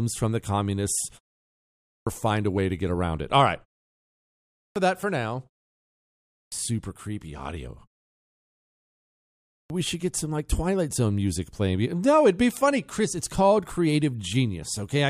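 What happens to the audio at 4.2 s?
At 4.2 s the audio has a clipped start after a pause. Following about 0.63 s of silence, the output device appears to have dropped into a low-power state and needed time to wake and lock again. The first 558 ms of returning speech, from 4.2 to 4.76 s, is swallowed, so the talker cuts in abruptly mid-utterance out of silence, with the beginning of the phrase missing rather than fading up naturally.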